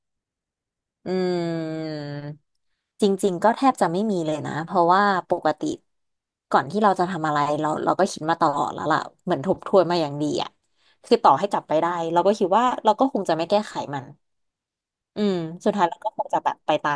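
No faults are audible anywhere in the speech recording.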